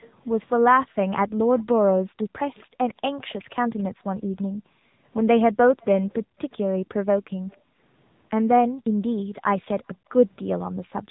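Throughout, the speech sounds buzzy and synthetic, with nothing above about 3.8 kHz. This is the AMR narrowband mobile codec at 7.95 kbps. At this rate it rebuilds the voice from a simple vocal-tract model excited by sparse pulses in 5 ms subframes, so the damage is plainly audible, and the 8 kHz sampling cuts off everything above the narrowband limit.

From 1.28 to 3.83 s, a faint second copy of the voice trails the original by 275 ms, well below the direct speech. It returns from 5.81 to 7.57 s, fainter still. This echo leak likely comes from a far end playing the call over a loudspeaker. Its echo canceller failed to remove everything its microphone picked up, so a delayed remnant was sent back.

The room sound also keeps dipping out and returning. Between 1.33 and 2.78 s it drops briefly, by as much as about 40 dB. Between 3.88 and 5.04 s the dropouts add up to around a second. From 6.23 s to the end they total a second and a half or so. 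This is background gated by the echo canceller: while the loudspeaker was active, the canceller pulled the microphone down hard, then released it. The call microphone processing trims the lowest bass, which is normal.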